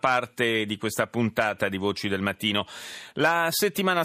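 No technical faults are audible.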